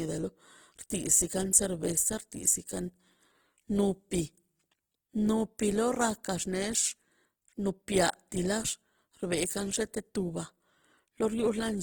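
Throughout, the speech sounds grainy and rough from Opus compression, likely a CELT-mode encode at about 16 kbps; a spectrogram shows noisy, nearly hole-free bands up to 20.1 kHz.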